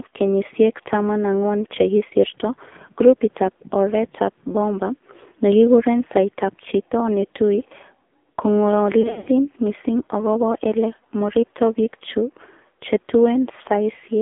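AMR narrowband mobile codec damage runs through the whole of this speech clip: the band stops at 200 Hz and 3.6 kHz, and the voice is heavily buzzy and synthetic. The codec rebuilds speech from a vocal-tract model excited by a few pulses per 5 ms subframe, and at a low bit budget, which fits the 5.9 kbps mode, those pulses are coarse, leaving a rough, artificial timbre. Lost AMR speech frames follow from 9.02 to 9.29 s, just before "missing agobo ele moribto". Frames failing their checks are filled by reusing the last good pitch and vocal-tract settings at falling gain, so the audio warbles, smears and dips in scattered gaps. Roughly 160 ms is missing across 240 ms, and the longest run of about 80 ms gives the clearest drawn-out fade before the voice returns briefly weak.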